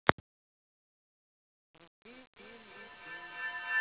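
Speech clip with a feedback echo between two devices from 1.44 s to the end, heard through a narrowband call path that stops at 4 kHz, consistent with G.711 mu-law. A second device in the room replays the call, and its sound loops back into the microphone, where no echo canceller removes it. Unlike ordinary single echo, the repeats return about every 0.3 s and pile up, reaching about 25 dB above the speech instead of dying away.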